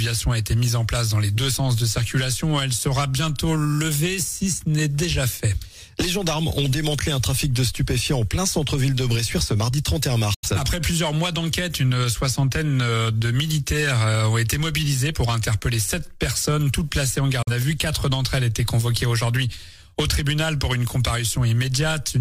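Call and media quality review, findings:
Digital broadcast dropout, 10.34 to 10.49 s: audio fades out over 8 ms, mutes, then resumes with about 85 ms of programme missing, which fits two lost frames. Receiver lost signal or failed frame checksums; muted until good frames returned.

Digital broadcast dropout, 17.42 to 17.52 s: same 8 ms fade to silence, about 43 ms of programme missing, consistent with a single lost frame. Receiver muting; the content sent meanwhile is not recoverable.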